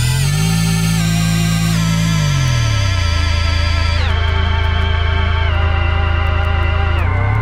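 Sharp word clock ticks run through the sound from 0.14 s to 7.35 s, repeating roughly every 0.2 s, about forty in all. A receiver running on its own clock, roughly 100 ppm adrift from the sender's, slips one sample each time the clocks cross.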